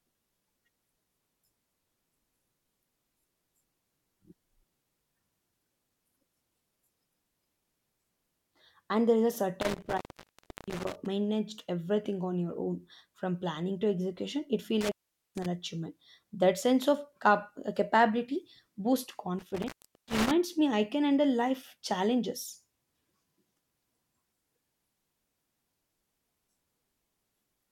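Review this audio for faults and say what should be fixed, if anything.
Three intermittent contact dropouts in this speech, at 9.61–11.06 s (after "there is a", before "managed everything on your"), 14.81–15.46 s, and 19.39–20.31 s (after "capability boosts"). A loose connection opens for 0.4–0.7 s, crackling at each edge. Reseat or replace that cable or plug.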